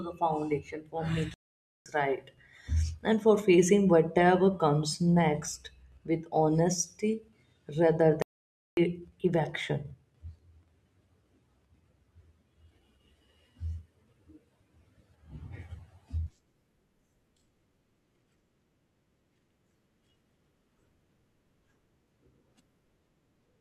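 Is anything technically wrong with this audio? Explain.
Yes. The speech has two playback stalls. The first runs from 1.34 to 1.86 s, about 0.52 s. The second runs from 8.22 to 8.77 s, about 0.55 s. Each time the sound cuts out mid-flow and the output goes silent. The gaps are long enough to notice plainly. The likely cause is the player running short of data, or its thread being blocked, so nothing reaches the output until it recovers.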